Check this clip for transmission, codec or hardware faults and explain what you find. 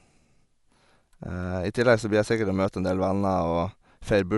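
One codec fault runs through the whole speech clip. A dull, band-limited sound with rough, fluttering noise around voiced tones likely comes from Dolby Digital compression at a low bitrate, roughly 64 kbps. Starved frequency lines are filled with dither noise. A spectrogram shows nothing above 11.4 kHz, and there is speckled noise between harmonics.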